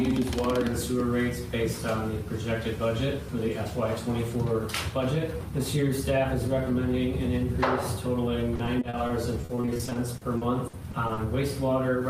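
From 8.55 to 11.19 s the audio breaks into choppy, robotic sound: repeated packet loss. About 21 short dropouts, none longer than 60 ms, are each filled by extending the preceding sound, so roughly 22% of that stretch is concealment rather than real audio.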